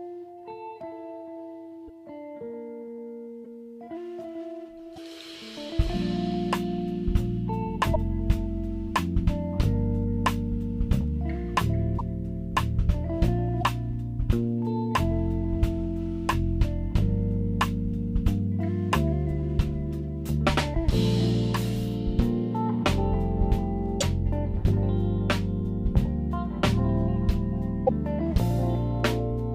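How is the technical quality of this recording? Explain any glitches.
There are eight short glitches, each about 30 ms, at 1.87, 3.44, 4.95, 7.93, 11.98, 13.60, 24.00 and 27.86 s. At each one the sound briefly skips and garbles. The likely cause is a broken MP3 bit reservoir. After frames (each fitting a 26.1 ms MP3 frame) are lost, the next frame reads borrowed bytes from the wrong place.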